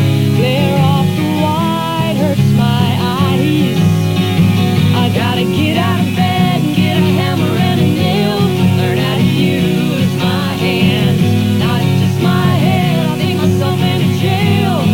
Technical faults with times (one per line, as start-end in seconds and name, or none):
0.00-14.93 low bit depth without dither